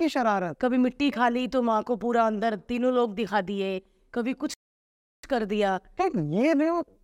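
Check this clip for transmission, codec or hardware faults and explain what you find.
The speech stops dead once, for about 0.70 s, with one playback stall from 4.54 to 5.23 s. The flow of speech cuts off in the middle, the output falls to silence, then the speech carries on again. The likely cause is the player running out of buffered data or having its output thread blocked, so nothing reached the output until it recovered. On a waveform this is a flat, near-silent stretch with abrupt edges. On a spectrogram it is a clean vertical gap, empty at every frequency.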